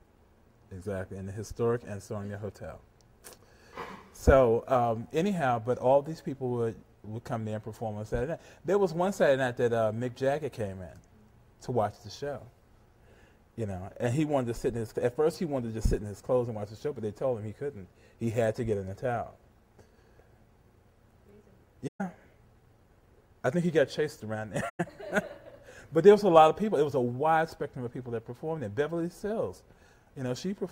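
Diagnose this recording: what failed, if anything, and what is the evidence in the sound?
The codec stage failed, with AAC frame loss and muting. The sound drops to silence from 21.87 to 22.01 s and again from 24.69 to 24.80 s, gaps of about 128 ms and 107 ms, lengths that fit runs of six and five frames of roughly 21 ms each. The decoder zeroed the missing spectra, and the overlapping windows fade the audio out and back in, so both holes have soft edges. A buffer underrun or hard cut would leave abrupt edges.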